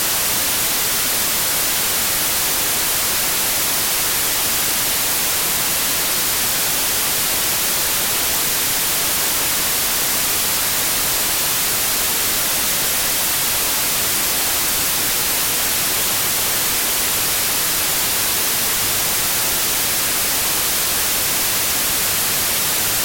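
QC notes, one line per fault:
Throughout: wrong sample width. The audio was written as 32-bit integers but is being read as 16-bit, so each original sample splits into two values. One holds the top bits and carries the real signal. The other holds the low-order bits and is effectively loud noise. The doubled sample count plays at half speed (0.5x), dropping pitch an octave. The speech sounds slow and deep, buried under heavy broadband noise.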